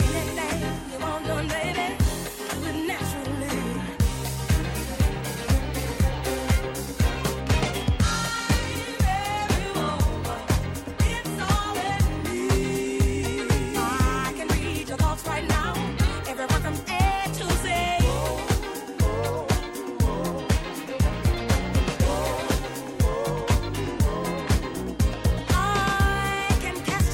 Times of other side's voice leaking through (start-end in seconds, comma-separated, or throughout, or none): none